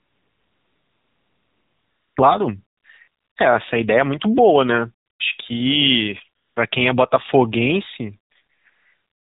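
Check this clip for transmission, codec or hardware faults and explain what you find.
Two faults are present: narrowband mobile codec coding across the whole clip, and repeated comfort-noise fill in the pauses.

The AMR narrowband mobile codec runs throughout. The speech is limited to telephone bandwidth, with nothing above 4 kHz, and has a plainly audible buzzy, synthetic edge. That points to AMR-NB at a low mode, consistent with 7.4 kbps. At that rate each 20 ms frame carries only a vocal-tract filter and a sparse pulse excitation, so fine voice detail is replaced by a modelled approximation.

AMR comfort noise fills seven stretches:
0.00–2.16 s (about 2.2 s)
2.78–2.84 s (60 ms)
3.08–3.36 s (280 ms)
5.06–5.20 s (140 ms)
6.42–6.56 s (140 ms)
8.54–8.66 s (120 ms)
8.70–9.22 s (535 ms)

In each stretch the sending side classed the signal as silence and stopped transmitting speech frames. 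The receiver then synthesised noise from a rough level and spectrum estimate. The result is a smooth, steady hiss that switches abruptly in and out against the speech, replacing the true background.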